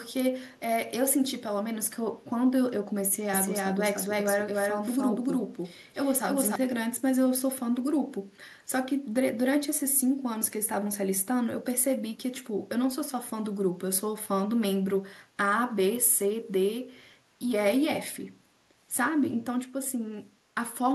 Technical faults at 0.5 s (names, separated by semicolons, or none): echo leak